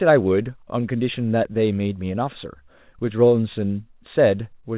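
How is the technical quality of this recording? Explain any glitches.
The speech shows no glitches or faults at all, and its band-limited, telephone-like character, with nothing above 4 kHz, is simply what a call path running G.711 mu-law coding sounds like when it is working as intended.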